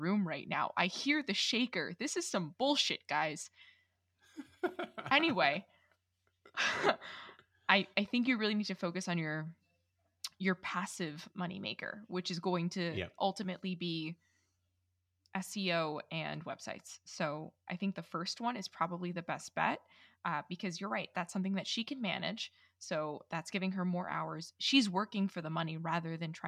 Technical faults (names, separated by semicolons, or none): none